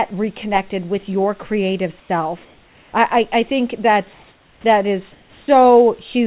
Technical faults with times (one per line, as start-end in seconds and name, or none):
2.00-2.09 comfort noise in place of the background
2.45-2.93 comfort noise in place of the background
5.12-5.48 comfort noise in place of the background